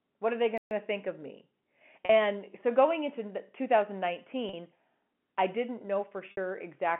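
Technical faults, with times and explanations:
0.58–0.71 s, playback stall: speech drops to silence for about 130 ms mid-flow, then resumes, likely because the player ran dry or its thread blocked.
2.05–2.09 s, 4.49–4.53 s and 6.31–6.37 s, packet loss with pitch repetition: brief held, buzzy sounds lasting 40 and 40 ms, and a 60 ms gap that fades into silence before the speech returns, where the receiver repeated the last pitch period to cover missing audio.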